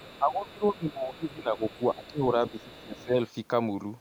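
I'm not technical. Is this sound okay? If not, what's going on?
No. Two related problems from a speakerphone-style call can be heard in this speech.

Other side's voice leaking through: a faint second voice sits underneath the talker at 0.0–0.72, 0.9–1.09, 1.28–1.32, 1.56–1.86, 2.04–2.23 and 2.47–3.04 s. It is quiet compared with the main voice, heard in short scraps. This is likely the far end playing through the talker's loudspeaker and being picked up again by the microphone, with the echo canceller failing to strip all of it out.

Speech suppressed in double talk: from 0.19 to 2.19 s, and again from 2.51 to 3.15 s, the talker's own voice sinks noticeably, at its worst dropping to a small fraction of its normal loudness. Both stretches overlap the leaked voice. The likely cause is that both people spoke at once, the echo canceller couldn't tell the talker apart from the echo, and it turned everything down together.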